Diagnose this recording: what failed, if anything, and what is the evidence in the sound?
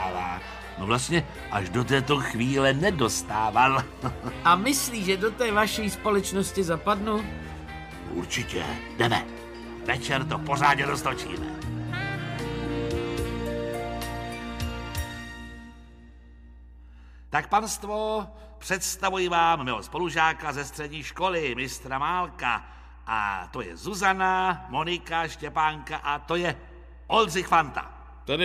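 Mains hum runs through the whole recording, a steady 60 Hz tone with its low harmonics sitting roughly 20 dB below the signal. The fault belongs to the analogue wiring stage. A ground loop, or a transformer close to the cabling, lets the power-line frequency leak into the signal path before conversion, so the tone never changes pitch or level. It is heard as a constant low drone with some low harmonics.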